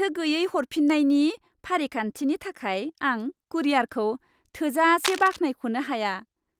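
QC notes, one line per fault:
5.04–5.38 s, cable scratch noise: for about a third of a second, a dense, uneven burst of scratching and rustling sits over the speech, only about 5 dB below it, so it is clearly audible. The likely cause is a worn cable, connector or control carrying a DC voltage being moved, its contact resistance jumping rapidly and injecting irregular noise into the signal for as long as the movement lasted.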